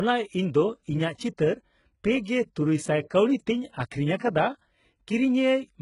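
From start to finish the speech has gritty, metallic sibilants and a lispy edge on s sounds, with nothing above 11.1 kHz. This is likely heavy HE-AAC compression, fitting a bitrate near 12 kbps, where rebuilt treble copied from lower bands misaligns harmonically.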